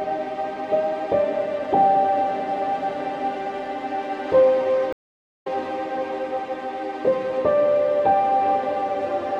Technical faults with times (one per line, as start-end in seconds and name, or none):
4.93-5.47 stream reconnect